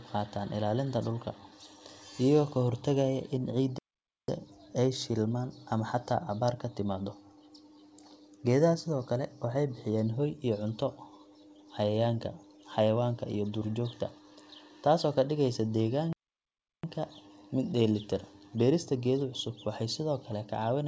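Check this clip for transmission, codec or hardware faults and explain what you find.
Two playback stalls interrupt this speech, one at 3.78 to 4.28 s (about 0.5 s) and one at 16.13 to 16.84 s (about 0.7 s). In each, the audio cuts out mid-flow into silence, then resumes. The likely cause is the player starving for data or its thread being blocked, so output halts until it recovers. On a waveform each shows as a flat gap; on a spectrogram, a blank vertical band across all frequencies, which here stop at 8 kHz, as fits G.722.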